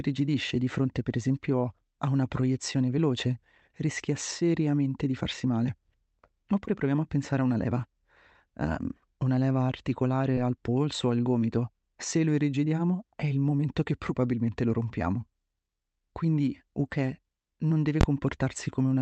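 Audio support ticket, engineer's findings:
Short concealed packet loss, 6.65–6.69 s, just before "proviamo a pensare a". Brief smear/wobble where about 20 ms of audio arrived too late for the decoder and about 16 ms was synthesised from the preceding sound, then cross-faded back into real signal. Probable component: network/jitter buffer feeding the Opus receiver. Spectrogram: preceding sound stretched for a few frames, slightly blurred onsets, all under the roughly 8 kHz ceiling of the call path. Waveform: preceding sound continued, no gap.

Invalid numbers at full scale, 18.01–18.03 s, right after "non deve". Very loud bang; the signal sits pinned at one extreme for about 23 ms, which fits a 1024-sample processing block whose calculation produced infinite or invalid values clamped to the rail. Probable component: DSP stage upstream of output. Waveform: flat rectangular slab far beyond the speech peaks with vertical edges. 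Spectrogram: full-height broadband stripe at both edges, nothing between.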